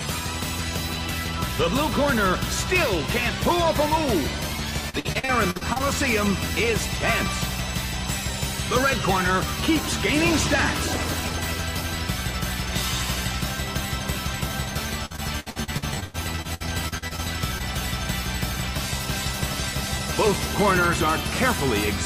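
Repeated packet loss (robotic sound) runs from 4.89 to 5.82 s and again from 15.06 to 17.20 s. Chunks of the stream arrived late or not at all, over and over, and each hole was patched by extending the preceding sound before the next dropout hit. About a third of each stretch is synthetic fill. The first stretch has holes up to 52 ms and the second up to 102 ms, which gives a choppy, stuttering texture with pieces missing.

Short concealed packet loss follows at 17.58 to 17.62 s, just after the second run. About 20 ms of audio never reached the decoder in time. The receiver bridged the gap by continuing the last sound and then blended back into the real signal, leaving a brief smear or wobble rather than an outright silence.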